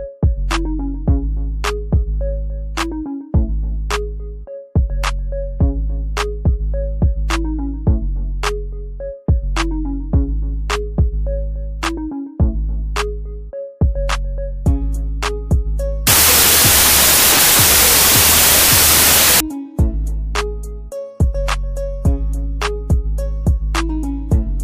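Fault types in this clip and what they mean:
wrong sample width: From 16.07 to 19.40 s, audio stored as 16-bit integers is read back as packed 24-bit integers. Each value is assembled from mismatched bytes of neighbouring samples, and only some keep the true signal's top bits. The passage becomes loud, harsh noise with the original sound buried inside it. Because three bytes are taken per sample instead of two, that buried sound runs 1.5 times too fast and is raised in pitch by the same ratio.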